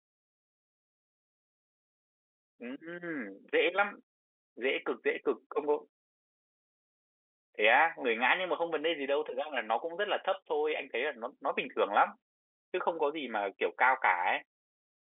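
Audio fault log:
Nothing stood out on listening beyond the narrow telephone-line sound of the G.711 coding, which lets nothing through above 4 kHz.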